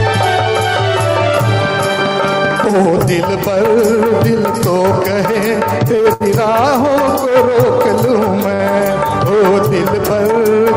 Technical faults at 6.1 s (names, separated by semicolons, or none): short stall from a late packet